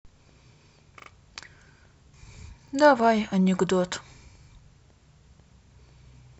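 Speech with three stutters from a repeated buffer. At 1.0 to 1.08 s the same 40 ms segment sounds twice more. At 2.68 and 4.44 s a 40 ms segment plays once more. Each repeat has a hard join. The repeat length suggests a buffer of about 40 ms. New audio arrived late, so the device replayed the previous block. Timing resumes afterwards with essentially no audio lost.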